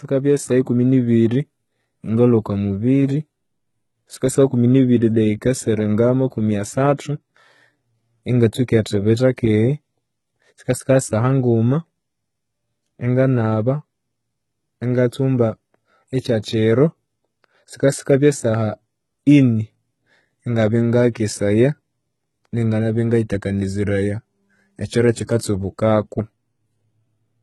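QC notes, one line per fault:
throughout: HE-AAC compression, likely; heavy damage, treble rebuilt from copied lower bands sounds gritty and lispy, nothing above 11.8 kHz, fitting a bitrate near 16 kbps.
16.43 s and 25.27 to 25.29 s: pre-echo; a brief hiss of 12 and 20 ms leads each sharp attack, codec noise spread backward across the block, softening the onset.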